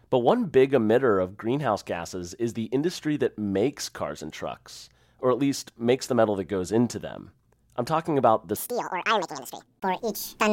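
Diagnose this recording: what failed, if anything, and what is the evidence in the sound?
From 8.56 s to the end at 10.52 s, right after "I'm talking about the", the speech suddenly runs at double speed, hurried and chipmunk-like, with pitch jumping roughly ten semitones. This is a section at the wrong speed. Tempo and pitch shift together, which rules out time-stretching or pitch processing. The likely cause is a clock mismatch at the editing or playback stage, where that segment was read at twice its true rate.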